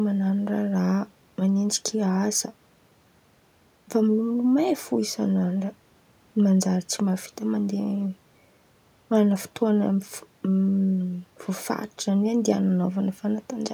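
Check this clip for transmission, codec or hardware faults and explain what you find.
No transmission, codec or hardware faults are audible here.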